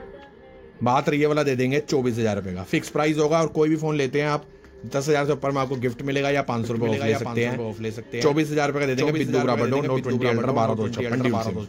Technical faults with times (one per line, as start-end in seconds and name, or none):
6.64-11.68 doubled audio track